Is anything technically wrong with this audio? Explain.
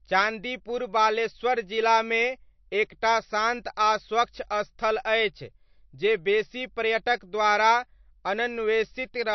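Yes. Throughout the speech there is plainly audible damage, likely from MP3 compression at a low bitrate around 36 kbps. Nothing remains above 6 kHz, so the top end sounds dull. Weak frequency lines flicker between frames, giving a watery, swirly texture and metallic chirps on s sounds.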